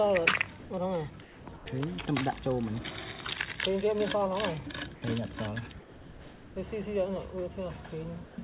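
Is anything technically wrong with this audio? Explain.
Yes. The sender's voice detector four times misjudged the signal. Sound dropped by the voice detector occurs at 0.6–0.7 s, 1.22–1.46 s, 1.56–1.66 s and 5.8–6.56 s. The detector likely treated real sound as background and stopped sending, so the receiver substituted comfort noise. Each span turns into steady noise or near silence, losing up to about 0.37 s of sound before it resumes.

From 8.26 to 8.38 s there is comfort noise in place of the background. Transmission paused during a true gap, likely under discontinuous transmission, and the receiver synthesized noise instead. The real background becomes a steady, featureless hiss about 4 dB quieter, within a band that stops at 4 kHz, as expected over a G.711 call path.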